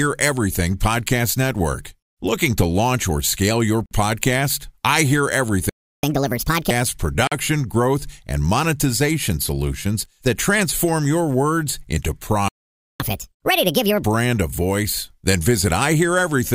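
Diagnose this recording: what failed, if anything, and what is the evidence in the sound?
Bluetooth stall at the wireless playback link: brief dropouts of about 50 ms at 3.86 s and 7.27 s, just before "growth and monetization solutions", likely from interference draining the headphone buffer.

Playback stall in the player: silence from 5.69 to 6.03 s, and from 12.48 to 13.00 s after "transform your words into", likely data starvation or a blocked audio thread.

Catch-up at higher speed, also in playback: right after each stall, 6.03 to 6.71 s and 13.00 to 14.03 s before "a voice", the audio runs 1.5 times faster and about seven semitones higher while it clears the backlog.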